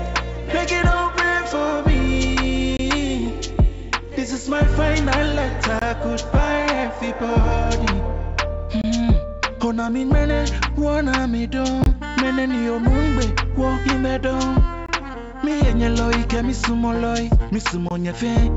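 A gap between chunks breaks the sound six times, at 2.77–2.79, 5.79–5.82, 8.82–8.84, 11.84–11.86, 14.86–14.89 and 17.89–17.91 s. Each hole lasts about 23 ms and recurs every 3 s, as the audio arrives in 3-second chunks. Each one is a brief, hard-edged dropout. On a waveform it appears as a flat line with abrupt walls; a spectrogram shows a thin vertical blank stripe across the full band, which tops out at 8 kHz on this G.722 call path.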